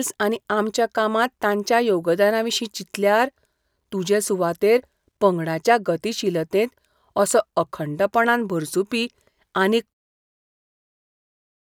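A speech recording with no technical faults to report.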